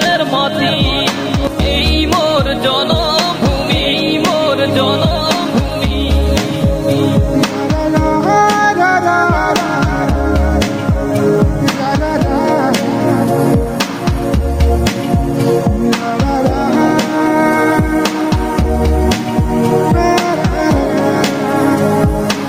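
Gain pumping runs through the whole clip. The level drops sharply as soon as a loud sound arrives, swinging by around 10 dB. Loud and quiet passages sit unnaturally close in level and the sound feels squashed. The likely cause is input gain set far too high for the microphone, with a fast limiter or compressor clamping down on each peak.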